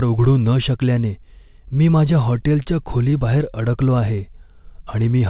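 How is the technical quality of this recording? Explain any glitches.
The recording has one glitch, scattered short gaps, heard through a narrow call path with nothing above 4 kHz, which fits a 64 kbps G.711 telephone codec.

From 2.42 to 3.42 s, about seven packets went missing, and the receiver patched each hole by extending the previous sound. The speech stays clear but picks up brief ticks and hiccups, each gap at most about 20 ms.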